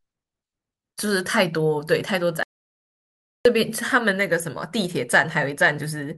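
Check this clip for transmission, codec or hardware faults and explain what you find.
One fault stands out: an audio dropout to silence from 2.43 to 3.45 s. For about 1.02 s the speech cuts off mid-flow into silence, likely because the input was lost while recording continued. Unlike a natural pause, no room tone remains, and speech resumes abruptly.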